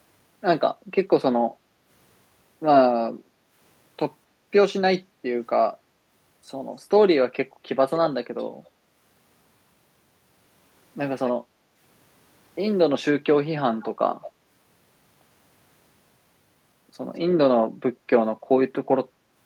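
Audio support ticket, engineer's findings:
Background gated by the echo canceller. Room tone dips at 5.08–5.23 s (about 6 dB) and 11.43–11.7 s (about 7 dB). Each dip lasts a fraction of a second, then recovers. Far-end echo canceller suppressing the mic while its loudspeaker plays.

Echo leak. Short delayed copies of the speech at 7.91, 8.65, 11.25, 13.81 and 14.21 s. Delay is 242 ms for the first three and 205 ms for the last two. They sit faint, roughly 20 to 35 dB under the speech. Likely a far-end loudspeaker echo the canceller did not fully remove, sent back down the line.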